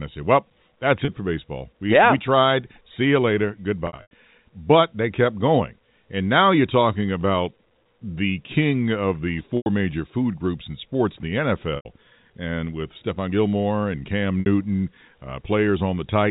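Packet loss with pitch repetition occurs at 1.05 s before "for baseball", 3.87 s after "you later", 9.57 s, 11.76 s and 14.40 s. The receiver loops the last pitch period, so the short gap at 1.05 s sounds held and buzzy, while the longer gaps fade into silence before the speech cross-fades back, unlike a plain dropout.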